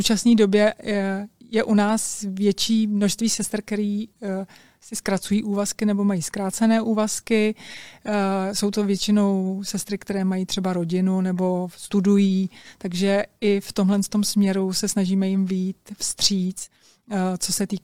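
There are no technical faults to describe in time order in this speech clip.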